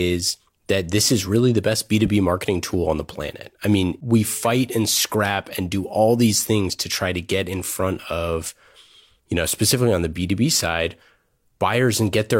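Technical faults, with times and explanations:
No technical faults detected.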